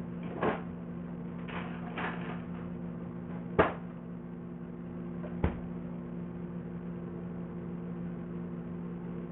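A recording of sounds, damaged from start to finish by what is likely Bluetooth SBC compression, starved to a level that fits roughly 48 kbps. The top of the spectrum drops out and flickers as the uppermost sub-bands lose their bits, while the remaining bands carry a gritty quantisation noise with aliasing tones. That fixed, band-split grittiness sets it apart from low-bitrate MP3 or AAC, whose artefacts swirl and smear around transients.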